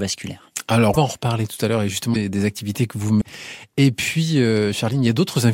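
Broken MP3 bit reservoir glitches at 0.93–0.97 s before "en reparler tout à", 2.13–2.16 s between "tout à l'heure et" and "activités que vous", and 3.20–3.23 s after "activités que vous". Each is a brief garbled jump, likely from dropped roughly 26 ms frames whose successors decode borrowed reservoir bytes from the wrong frame.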